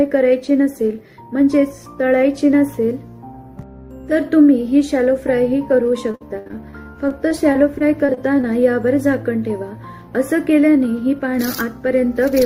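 Repeated packet loss makes the audio choppy and robotic from 6.11 to 8.45 s. Brief holes, the longest 72 ms, are patched by repeating earlier sound, which shows as smeared, duplicated spectrogram slices.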